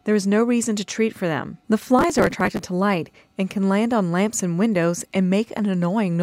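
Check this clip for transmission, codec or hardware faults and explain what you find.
One fault: processor overload crackle, from 1.99 to 2.59 s. Dozens of very short buffers, around a millisecond and a half each, were skipped, leaving hard-edged gaps heard as gritty tearing. The waveform shows notches, and the spectrogram shows dense vertical broadband streaks.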